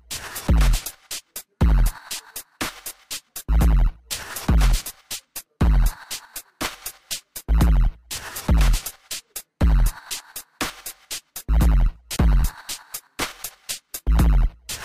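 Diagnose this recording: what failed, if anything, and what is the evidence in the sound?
Crude rate conversion during sample-format conversion, throughout: a gritty inharmonic fizz about 20 dB down tracks loud sounds, fitting nearest-sample repetition from 32 to 44.1 kHz.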